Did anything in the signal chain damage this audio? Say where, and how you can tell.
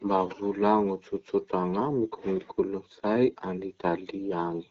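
No, the speech carries the character of an AMR wideband (HD Voice) link at a rate consistent with 12.65 kbit/s, where the codec's coding stays light and the speech remains clear, and no stage of the chain has damaged the signal.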